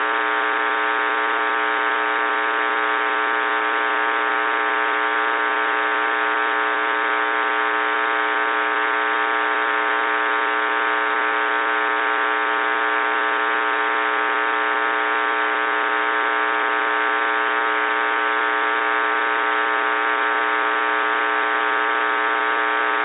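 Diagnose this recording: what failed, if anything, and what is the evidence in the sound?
No fault found in this recording.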